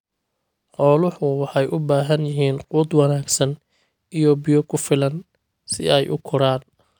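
No technical faults are audible.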